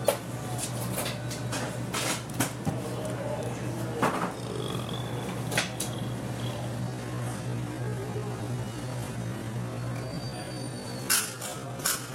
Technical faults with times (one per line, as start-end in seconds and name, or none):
6.78-12.15 time-stretched section